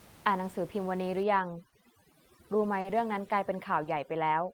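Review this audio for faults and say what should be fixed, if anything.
Overdone noise removal runs from 1.23 s to the end. An over-strong suppressor mutes bands near the room noise floor, which sits about 23 dB below the speech, leaving twinkling specks. Unlike plain room noise, the background drops unnaturally. Use a gentler reduction setting.

Short stalls from late packets occur at 1.69 s, 2.81 s and 3.84 s. An empty jitter buffer stretches the last sound for 30, 40 and 20 ms. Nothing is missing, unlike a dropout, so the sound is simply held. Enlarge the jitter buffer margin.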